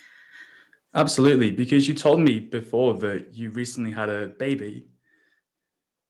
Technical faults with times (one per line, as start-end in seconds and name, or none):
0.98-1.35 microphone overload
1.27 microphone volume stepped down
2.05-2.28 microphone overload
2.28 microphone volume stepped down